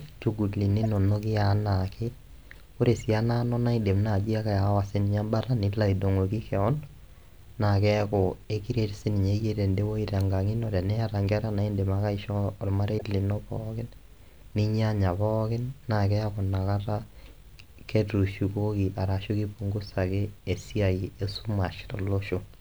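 Two brief glitches break into the speech, at 0.83 to 0.86 s and again at 12.98 to 13.02 s, the second louder. Each is a corrupt frame decoded: flipped bits in the compressed stream led the decoder to misread gains or codes, so it placed energy at the wrong frequencies for the length of the damaged data. The first burst sounds like a short run of consecutive bad frames, the second like a single one.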